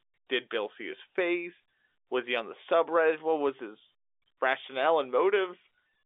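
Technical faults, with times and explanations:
No technical faults, with times and explanations, are present, since the speech comes through on a normal G.711 telephone line with the usual band of roughly 300 Hz to 3.6 kHz.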